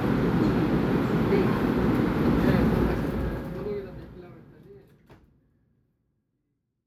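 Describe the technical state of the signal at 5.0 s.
At 5.0 s the signal is intact, sitting partway through a smooth fade-out that lowers the level gradually without any click or hard edge.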